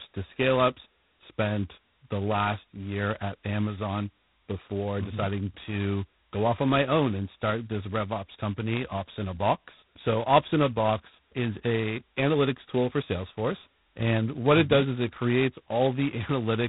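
Throughout, the speech carries heavy G.726 ADPCM damage: each sample codes only a coarse difference from a prediction, which fits 16 kbit/s, so a rasping hiss rides the speech's level, unlike steady background noise, and nothing passes above 3.9 kHz.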